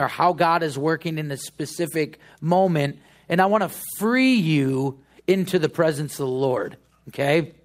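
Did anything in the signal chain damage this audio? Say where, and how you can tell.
No, nothing in the signal chain damaged this audio.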